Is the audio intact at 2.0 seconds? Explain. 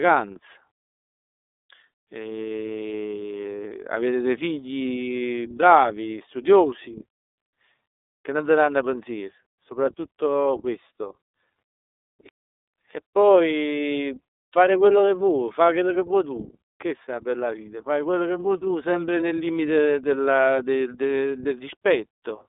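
No. The iLBC codec colours the speech at 2.0 s, as it does throughout. The sound is squeezed into roughly 300 Hz to 3.7 kHz, and each 30 ms frame is coded on its own, which fits the 13.33 kbps mode. The result is a plainly rough, synthetic edge on the speech.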